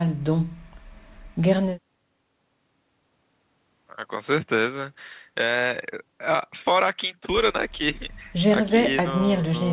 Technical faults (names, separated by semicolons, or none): none